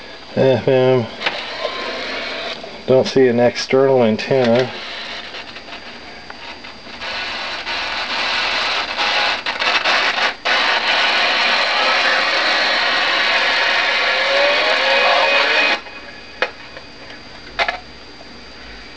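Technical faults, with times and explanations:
No technical faults can be heard in this clip. The sound comes through a call path whose codec leaves nothing above 8 kHz, which fits a wideband codec such as G.722 at 64 kbps.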